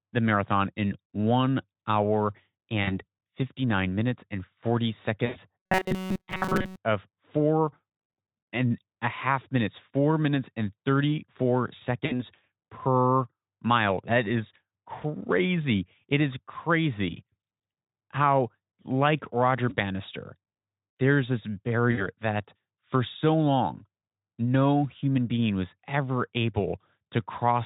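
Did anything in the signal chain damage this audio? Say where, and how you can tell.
Yes. At the network stage there is VoIP packet loss concealed by the speech codec at 2.83–2.99 s (just after "marathon in one hour"), 5.25–5.37 s, 12.05–12.24 s (just before "per mile"), 19.69–19.76 s and 21.91–22.07 s. Each gap turns the sound into a smeared, buzzy or noisy stretch that fades in level, which fits about 20 to 100 ms of missing audio. The decoder extrapolates its last pitch and filter and lowers the gain, so the sound stays thin briefly after each gap. The Speex coding itself adds little audible damage.

From 5.60 to 6.78 s, ending just before "of four", the audio becomes a rigid, metallic buzz at a fixed 188 Hz that only loosely tracks the syllables. This is robotic sound from repeated short buffers, most likely at the driver or buffer stage. When new audio arrives too seldom, the playback side loops a fragment of about 5.3 ms, one cycle of 188 Hz, and skips the real material. 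That loop covers most of the span.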